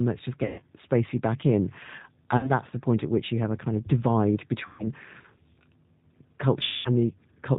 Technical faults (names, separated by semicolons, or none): G.729 codec; VoIP packet loss concealed by the speech codec